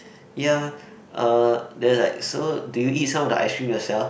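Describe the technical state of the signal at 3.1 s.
At 3.1 s the speech signal is intact, with no audible technical fault at that moment.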